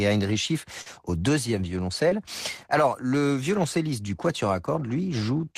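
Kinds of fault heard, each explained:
short concealed packet loss: Twice in this speech, audio packets failed to reach the decoder in time: 40 ms of signal starting near 0.81 s and 20 ms near 2.10 s. The receiver covered each gap by extending the sound that came just before it, generating 42 ms and 15 ms of stand-in audio, then blending back into the real signal. Each spot is heard as a brief smear or wobble where the speech momentarily loses definition.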